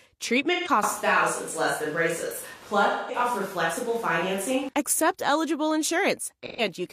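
At 0.52 s a short smeared, noisy patch lasting until about 0.69 s briefly blurs the speech. This is AAC frame loss with concealment. Roughly 128 ms of coded audio went missing, which fits about three lost AAC frames, and the decoder filled the gap by reusing the last good spectrum with scrambled phase. The result has a phasey, washed texture rather than true silence.

From 0.83 s, just before "accept eligible", the speech suddenly turns roomy and hollow and loses bass. Background noise becomes noticeable at roughly 25 dB below the speech, but the level barely changes. The likely cause is a switch to a distant microphone: the close microphone dropped out, and a farther pickup such as a camera microphone carried the sound instead. At 4.69 s the close, dry sound snaps back.

Inside that stretch, from 2.87 s to 3.19 s, a longer concealed gap of about 213 ms (consistent with around five lost frames) smears the sound.

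A third AAC frame loss with concealment runs from 6.46 s to 6.61 s. It is another gap of about 128 ms with the same brief, noisy smear.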